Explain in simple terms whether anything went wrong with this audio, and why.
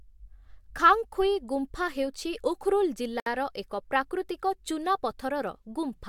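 At 3.20 s there is a gap at a join of encoded pieces. Leftover encoder padding opens a 64 ms gap in the speech, then it resumes with nothing missing.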